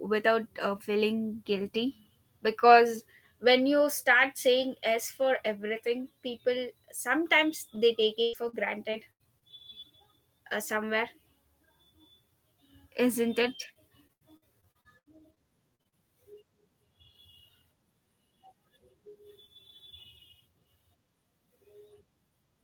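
Repeated packet loss (robotic sound) occurs from 7.75 to 9.44 s and again from 13.62 s, just after "isn't it", to 15.95 s. The stream kept losing audio: six holes in the first stretch and twelve in the second, the longest 99 ms and 78 ms. Each hole was filled by stretching the preceding sound, about a sixth of each span, so the speech turns choppy, with fragments missing.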